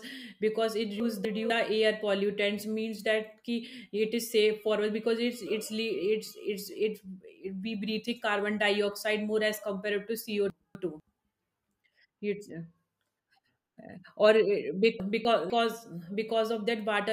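Chunks out of order at 1.0 to 1.5 s, 10.5 to 11.0 s and 15.0 to 15.5 s. At each, a 250 ms block of speech plays one chunk late, so two neighbouring pieces swap. The sound briefly jumbles around the hard joins, which show as vertical breaks in the spectrogram and waveform.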